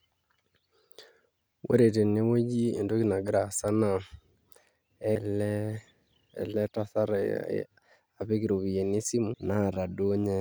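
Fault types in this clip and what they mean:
CD skip: the laser is jolted off its track and lands on another turn of the spiral, so playback briefly drops out and resumes from a different point in the speech. Here that happens twice, at about 5.15 s and 9.34 s, each with a very short mute of a few milliseconds heard as a tick before the jump. On a waveform, look for a near-flat gap followed by a discontinuity. A spectrogram shows a thin vertical broadband line where the content abruptly changes.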